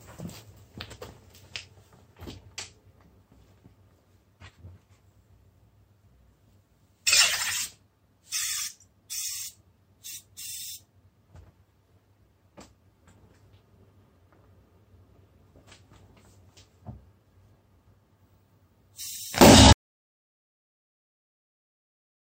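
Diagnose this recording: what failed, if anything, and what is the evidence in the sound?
At 19.73 s the sound cuts off into silence with no room tone through the end: an audio dropout to silence, likely a lost input link while recording continued.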